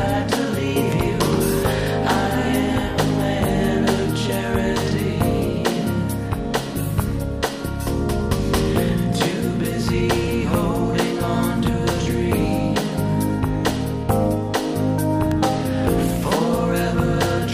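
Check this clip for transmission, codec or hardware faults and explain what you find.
Two short faults are audible, both electrical switching spikes, at 0.92 s and 15.31 s. Each is a sharp snap or tight cluster of clicks sitting on top of the audio, the first peaking around -10 dBFS and the second quieter, around -15 dBFS. The likely cause is a nearby switch, motor or static discharge arcing briefly and coupling into the audio line. On a waveform each shows as a thin, isolated vertical spike; on a spectrogram, as a narrow vertical line spanning the full frequency range.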